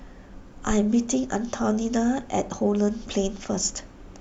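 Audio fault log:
0.71–0.79 s, phantom power thump: a deep, low thump peaking at about -18 dBFS, left by a supply switched on or off on the live input, its voltage step pushed through the coupling capacitors. It is a single pulse decaying in about 18 ms, unlike the rumble of handling noise.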